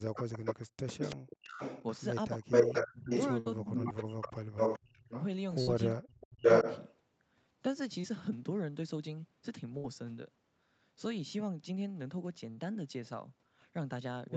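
From the start to 1.49 s, the talker's level sinks sharply and in pieces, falling by as much as about 40 dB over roughly 0.7 s in total. This is speech suppressed in double talk: the echo canceller most likely could not tell the near voice from the loudspeaker return while both sides spoke, so it turned everything down. Unlike a dropout from the network, the fades follow the other party's activity and are not clean gaps. The same suppression returns from 2.36 to 5.13 s, about 35 dB deep and covering around a second and a half, and again from 5.96 to 6.43 s, about 40 dB deep.

Overlapping this, from 0.32 to 5.23 s, a second copy of the voice trails the original by 430 ms at a level only about 5 dB under it. This is an echo leak, likely from a loudspeaker whose canceller let part of the picked-up signal back through. A fixed delay repeating the same sound marks it as echo rather than reverberation. 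A weaker leak, about 10 dB down and delayed 590 ms, follows from 5.91 to 6.97 s.

Bursts of packet loss occur at 3.39–3.48, 5.62–5.69, 9.77–9.86 and 12.50–12.59 s. In each, about 60 ms of audio is lost, or 80 ms in the last burst. The receiver stretches the last sound into a held buzz or a fading hiss, then jumps ahead. That skip in content distinguishes these bursts from the suppression fades.

At 8.01–8.05 s, a short concealed packet loss of about 20 ms leaves only a brief smear or wobble. It is shorter and smoother than the bursts. Throughout the clip, the audio's top end stops at 8 kHz, which fits the Opus path at around 48 kbps.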